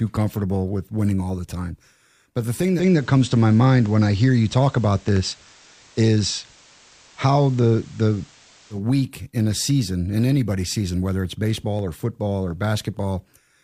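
After "the thing", at 2.74 s, the digital radio blends to analogue FM over 122 ms, returning at 8.82 s before "in a season in". The receiver lost the digital stream: hiss sits roughly 30 dB below the speech, and level shifts about 3 dB.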